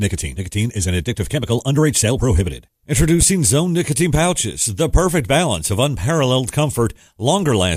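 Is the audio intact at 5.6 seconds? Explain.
Yes, the speech plays through cleanly at 5.6 seconds, with no dropout, click, distortion or other fault at that moment.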